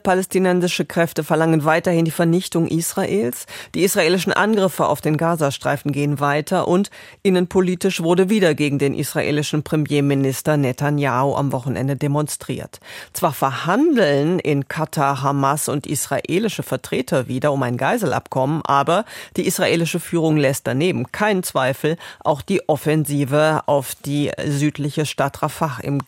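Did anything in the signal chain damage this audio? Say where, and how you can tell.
No, nothing along the chain from capture to playback has left an audible mark on this speech, and the signal holds steady level, continuity and bandwidth at every point.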